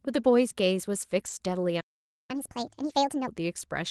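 Speech carried over an Opus call path whose bandwidth tops out around 12 kHz, consistent with roughly 32 kbps coding. There are three kinds of fault. A lost packet rebuilt from error correction appears at 1.19 to 1.29 s and again at 2.89 s. These stretches turn briefly rougher and noisier but never drop out, which sets them apart from concealment or gaps. The longer one fits three 20 ms packets replaced by low-bitrate copies. A playback stall runs from 1.80 to 2.31 s, about half a second of dead silence in mid-flow. It is likely caused by the player starving for data or being blocked, rather than a codec dropout. Catch-up at higher speed follows from 2.31 to 3.28 s, with speech running 1.5 times fast and roughly seven semitones higher before returning to normal. Speed and pitch rising together distinguish it from time-stretching.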